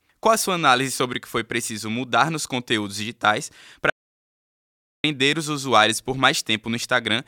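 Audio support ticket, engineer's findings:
Audio dropout to silence, 3.9–5.04 s. Cuts after "mudar nos conteúdos digitais", resumes at "os usuários por". Silence written, no room tone. Likely input link lost.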